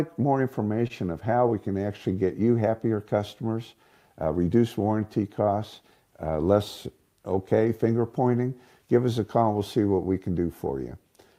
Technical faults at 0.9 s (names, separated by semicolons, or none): short stall from a late packet